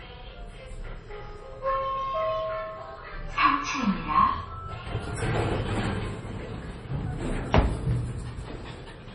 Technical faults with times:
0.00-9.15 MP3 compression

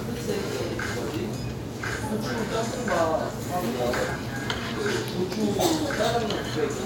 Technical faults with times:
2.40 dropped samples
4.16 compressed frames skipped
6.28 dropped samples

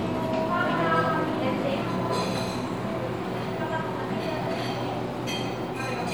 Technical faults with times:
none

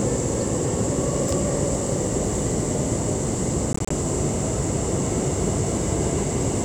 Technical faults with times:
3.73-3.91 Bluetooth dropout

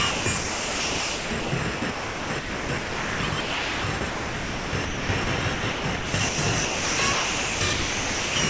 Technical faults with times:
0.11-5.27 sound chopped by the voice detector
5.54-6.38 sound chopped by the voice detector
6.65-8.36 sound chopped by the voice detector

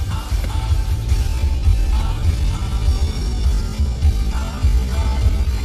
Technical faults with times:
1.13-5.64 time-stretched section

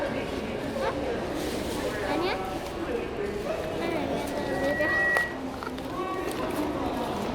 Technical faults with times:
4.26-5.45 loudspeaker feedback squeal

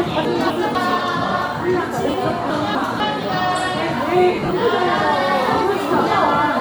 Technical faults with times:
0.25-0.75 chunks out of order
2.10-2.14 lost LE Audio frames
2.50-3.00 chunks out of order
4.35-4.51 lost LE Audio frames

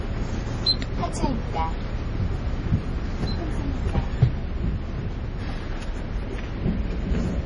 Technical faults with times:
0.00-7.45 MP3 compression

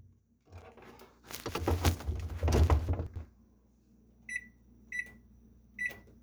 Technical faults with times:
1.49-1.67 chunks out of order
3.06-3.25 chunks out of order

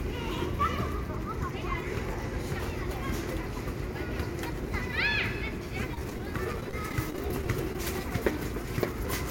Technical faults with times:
5.94-7.75 repeated packet loss (robotic sound)

